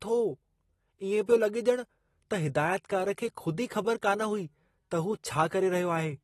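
Throughout, likely AAC compression at a low bitrate, around 32 kbps, strips everything above 12.4 kHz, leaving the speech audibly dull and smeared.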